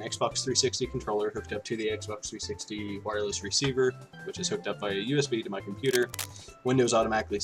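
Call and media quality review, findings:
Cable scratch noise, 5.85 to 6.31 s: dense, uneven crackle over the sound for about half a second, roughly 10 dB below the signal. Likely a worn cable or connector moving, with its contact resistance fluctuating. Spectrogram: broadband vertical speckle. Waveform: ragged spiky bursts.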